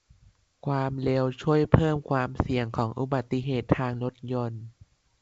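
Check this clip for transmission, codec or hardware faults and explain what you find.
Nothing in this speech clip points to a fault: it arrives over G.722 wideband telephone coding at 64 kbit/s, with the audio reaching up to about 7 kHz and any trace of the codec itself no more than faint.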